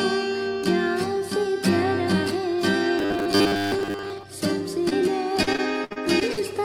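Robotic sound from repeated short buffers runs from 2.99 to 4.23 s. Across most of this stretch the audio turns into a rigid, metallic buzz at 100 Hz that only loosely follows the underlying sound. The likely cause is audio arriving too seldom, so playback keeps looping the last 10 ms of material while the real signal in between is skipped. That fixed 10 ms repetition sets the 100 Hz buzz.

Short concealed packet loss occurs at 4.89 to 4.93 s. About 20 ms of audio never arrived in time, and the receiver covered 16 ms of that gap by extending the preceding sound, pitched if it was tonal and as shaped noise if not, before blending back into the real signal. The result is a brief smear or wobble at that moment.

Repeated packet loss (robotic sound) spans 5.43 to 6.39 s. Seven separate gaps strike in quick succession, removing 240 ms in total, with the longest lasting 63 ms. Each gap is patched by continuing the last sound, and these patches add up to 222 ms, roughly a quarter of the span. 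The next loss arrives before the audio settles, so the passage sounds choppy, with pieces missing.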